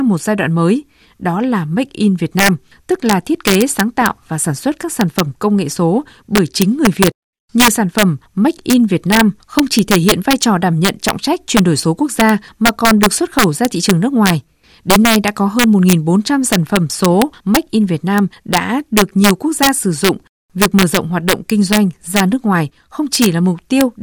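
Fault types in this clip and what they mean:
Integer overflow: present throughout the speech, where the signal is pushed about 5 dB past the integer ceiling and the arithmetic wraps instead of limiting. Any peak exceeding the maximum jumps to the opposite extreme of the range rather than flattening at the top. Only a small fraction of samples, well under one percent, cross that line, so the damage lands as sudden, harsh cracks on the loudest syllables, far sharper and more violent than ordinary clipping.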